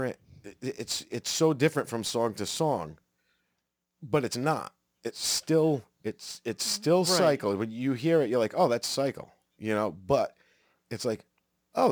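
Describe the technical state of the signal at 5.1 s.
Crude rate conversion is present at 5.1 s, as it is across the whole clip. The pattern fits a 48 kHz to 44.1 kHz change made by picking the nearest sample without filtering, leaving a gritty, inharmonic fizz around 25 dB below the speech.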